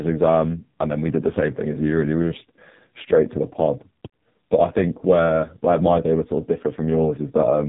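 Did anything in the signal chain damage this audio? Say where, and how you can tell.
Yes. AMR narrowband mobile codec, throughout: the speech is band-limited with nothing above 3.8 kHz and heavily buzzy and synthetic, which fits a very low-bitrate mode near 5 kbps.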